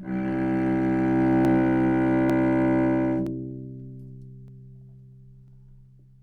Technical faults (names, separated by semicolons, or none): dropped samples